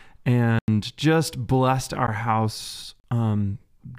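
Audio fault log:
0.59–0.68 s, 2.07 s, 3.00–3.04 s: block of digital silence. The speech drops abruptly to silence and returns unfaded. The 93 ms gap is a hole, the 13 ms one a tick, and the third lasts 40 ms.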